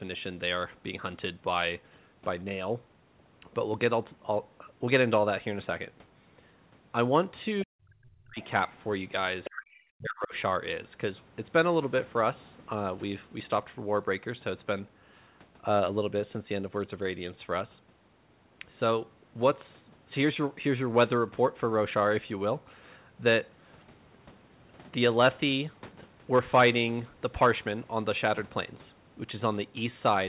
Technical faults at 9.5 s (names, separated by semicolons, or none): other side's voice leaking through; speech suppressed in double talk